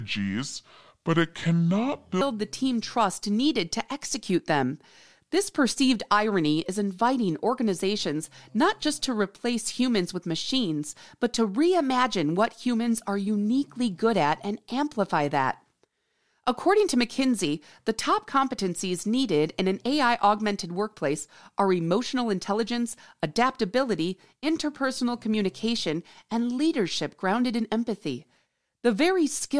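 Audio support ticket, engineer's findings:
Wrong sample rate, 0.00 to 2.21 s. Sound runs slow and low, at 0.69x speed and about 6.5 semitones flat, which fits 32 kHz material clocked out at 22 kHz without resampling. Probable component: stream-start rate negotiation or output clock config.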